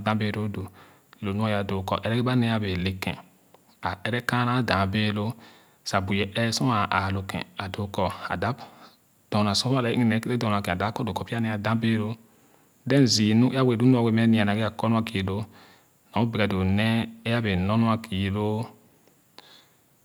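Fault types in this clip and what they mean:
No technical faults can be heard in this speech clip. Nothing in it calls for a fault entry.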